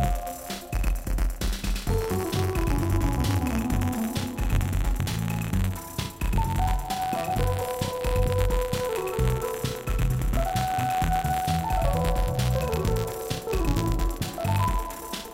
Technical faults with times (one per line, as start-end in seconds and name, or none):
0.00-15.33 buffer tearing